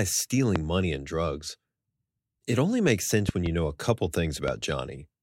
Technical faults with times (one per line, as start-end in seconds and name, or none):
0.56-0.58 loud pop
3.29-3.48 loud pop
4.48-4.51 loud pop